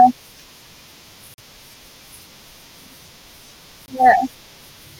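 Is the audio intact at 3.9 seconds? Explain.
No, there is a block of digital silence from 3.86 to 3.88 s: a 20 ms gap of silence, with abrupt edges that produce a brief hole.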